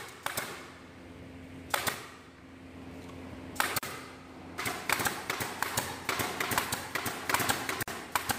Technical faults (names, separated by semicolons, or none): gap at a join of encoded pieces